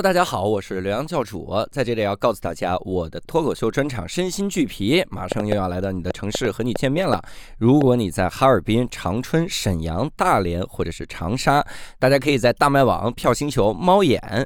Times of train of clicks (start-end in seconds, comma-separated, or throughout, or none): 5.32-7.82